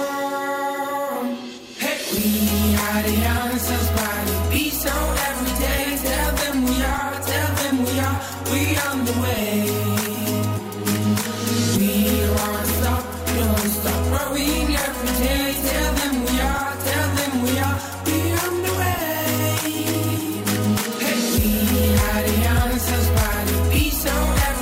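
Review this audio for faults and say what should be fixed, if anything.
Nothing in this recording needs fixing, as no technical faults can be heard anywhere in it. No corrective work is called for before it is used.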